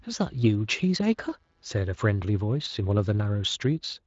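From the start to about 2.04 s there's computer activity noise, a faint buzz pulsing at roughly 150 Hz and sitting about 45 dB under the speech. Load changes in the machine are nudging the audio circuit's shared ground, and then it drops away.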